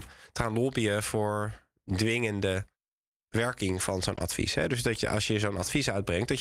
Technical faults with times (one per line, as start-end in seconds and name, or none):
4.15-4.19 short concealed packet loss
4.17-4.19 lost packet rebuilt from error correction